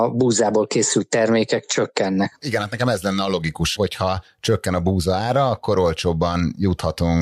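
No audible technical faults.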